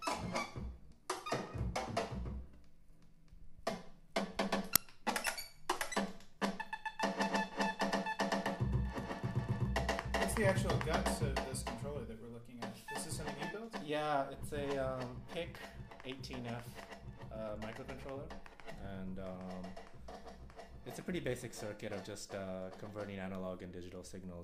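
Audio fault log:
4.76 s, uninitialised buffer: a loud crack about 5 ms long. The device played a block holding leftover memory, not audio.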